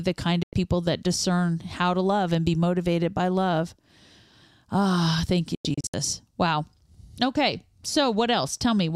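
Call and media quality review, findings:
Digital broadcast dropout: speech mutes 0.43–0.53 s after "the kind" and resumes at "people that discern how". A second dropout follows "thank you" at 5.55–5.94 s as scattered short holes, the longest 96 ms. Cause is receiver muting on bad frames, with gaps fitting 32 ms frames. Fades take 3 ms. Content is lost.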